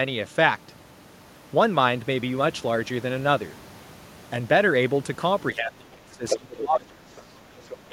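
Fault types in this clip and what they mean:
Speech suppressed in double talk, 5.52 to 7.36 s and again at 7.89 s: when both ends talk at once, the echo canceller likely can't tell the local talker from loudspeaker echo and pulls both down. Here the speech dips by roughly 25 dB across about one and a half seconds, with a brief, shallower dip of around 10 dB at the very end.
Other side's voice leaking through, at 6.29 to 6.38 s, 7.17 to 7.21 s and 7.64 to 7.76 s: the far-end voice, played on the talker's loudspeaker, likely isn't fully cancelled from the microphone. It surfaces as short scraps, the first nearly as loud as the speech, the second barely audible, the third noticeably quieter.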